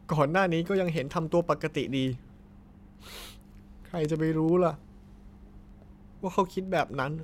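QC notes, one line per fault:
0.11–7.23 s: word clock ticks. Sharp single-sample ticks repeat about every tenth of a second, around seventy in all, as the receiving device's free-running clock slips against the sender's by roughly 200 ppm, dropping or repeating one sample per slip.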